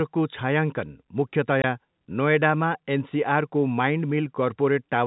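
At 1.62 to 1.64 s there's a 20 ms hole of packet loss filled with silence, which fits one dropped packet, with hard edges.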